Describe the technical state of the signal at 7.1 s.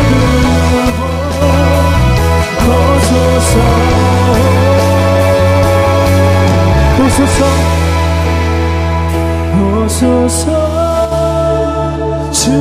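At 7.1 s the signal is intact, with no technical fault present at that moment.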